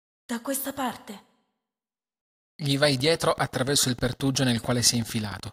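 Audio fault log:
2.85–5.48 s: train of clicks, about forty evenly spaced pulses at 13.4 per second, roughly as loud as the speech, likely interference from nearby equipment.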